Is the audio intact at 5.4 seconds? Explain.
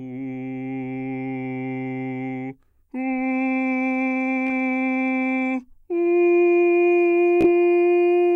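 Yes, the music plays through 5.4 seconds intact, with no dropout, click, distortion or other fault at that moment.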